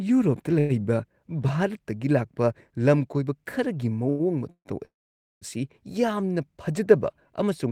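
At 0.59 s a call audio freeze holds the sound as a brief fading buzz for about 0.1 s, then it resumes. At 4.10 s a short stall from a late packet stretches a sound for about 0.1 s, with a slight buzz or dip. The packet arrived late. Nothing is lost. At 4.51 s another freeze fills 0.14 s, half of it silence. At 4.85 s the longest freeze leaves about 0.52 s of silence before the audio continues at 5.44 s. Packets were likely delayed, emptying the jitter buffer.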